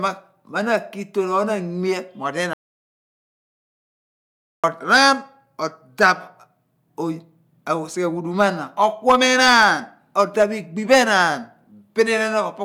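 Audio dropout to silence, 2.53 to 4.64 s: the input was likely lost while recording continued, leaving about 2.1 s of total silence without room tone.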